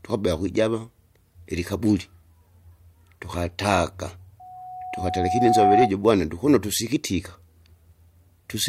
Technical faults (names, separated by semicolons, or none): loudspeaker feedback squeal